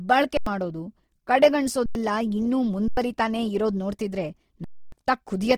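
Across the whole clip the speech has a rough, grainy texture, with tonal parts of the sound turning noisy rather than swirly, while content still reaches to about 20.2 kHz. This is likely Opus compression in its fullband music mode, where the encoder keeps each band's energy but fills starved bands with folded or noise-like content. The degree of graininess points to a low rate, around 16 kbps.

An underrun with held sample occurs at 0.37 to 0.46 s, 1.86 to 1.95 s, and 2.88 to 2.97 s. Each is a flat hold of about 93 ms, which fits a 4096-sample buffer running dry while the converter held its last value. The sound stops with little click, and roughly 100 ms of audio goes missing each time. A longer underrun, about 279 ms, follows "ಇರೋದ್ ನೋಡ್ತಿದ್ರೆ" at 4.64 to 4.92 s, losing roughly 300 ms.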